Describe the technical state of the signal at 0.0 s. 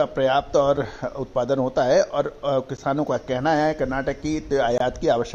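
At 0.0 s the signal is intact, with no dropout, click, distortion or other fault audible at that moment.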